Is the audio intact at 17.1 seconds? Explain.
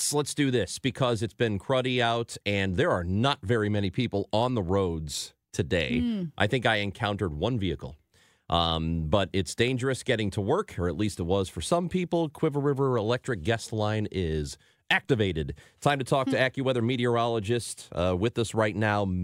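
Yes, at 17.1 seconds the audio is intact, with no fault present at that moment.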